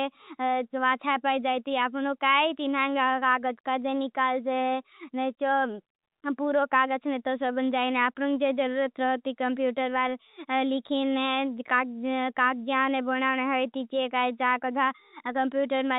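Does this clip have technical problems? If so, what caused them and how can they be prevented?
No, there are no technical problems to report in this speech clip. It has gone through a call path using the G.711 mu-law codec at 64 kbps, so the audio carries nothing above 4 kHz, which is how that codec normally behaves.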